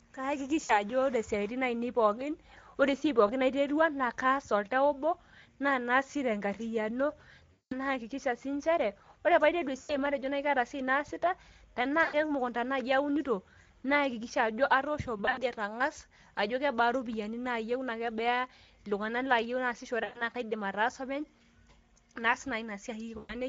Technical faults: Speex codec; VoIP packet loss concealed by the speech codec

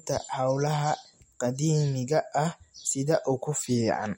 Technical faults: MP3 compression

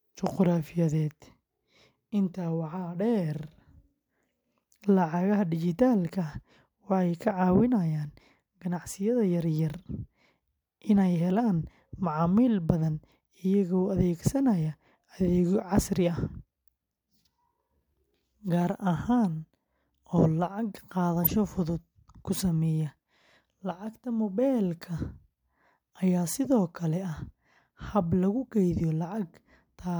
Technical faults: corrupt frame decoded

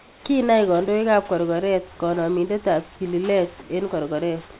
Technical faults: comfort noise in place of the background

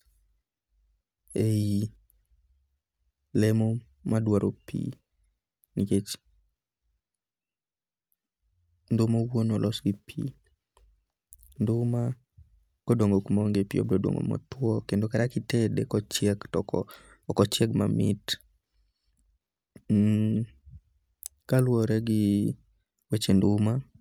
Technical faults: none

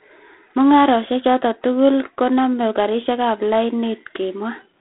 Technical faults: G.726 ADPCM

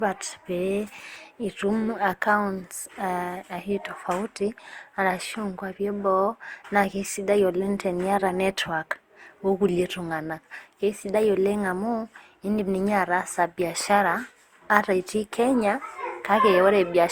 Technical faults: generation loss

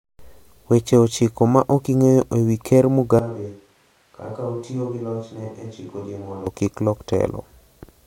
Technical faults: switch to a distant microphone

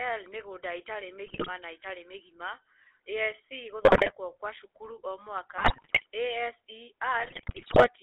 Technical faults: GSM full-rate codec; GSM bit errors

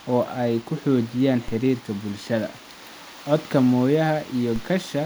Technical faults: DC step

